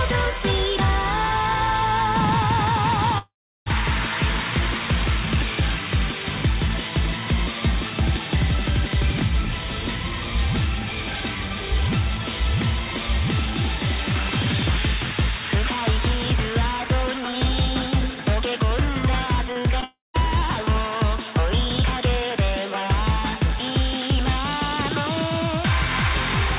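Audio carried over a call path band-limited to 4 kHz, which fits G.711 mu-law at 64 kbps, shows two kinds of fault. A long network dropout, likely a stretch of lost packets, cut about 0.48 s from 3.18 to 3.68 s and about 0.3 s from 19.84 to 20.16 s. In each case a fading continuation of the last sound gives way to silence, about 0.34 s and 0.15 s long, before the audio resumes with the lost portion gone. Just before the second gap, short concealed packet loss struck at 19.52 to 19.61 s, 19.62 to 19.66 s and 19.80 to 19.84 s. Missing chunks of 40, 20 and 20 ms were patched by extrapolation, causing brief smears and wobbles and a slight stretch in timing.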